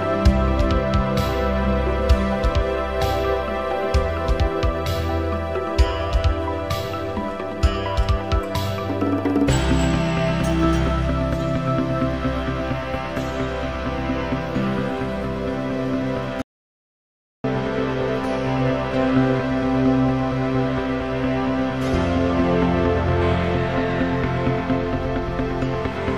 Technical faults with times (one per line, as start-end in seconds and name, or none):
16.42-17.44 audio dropout to silence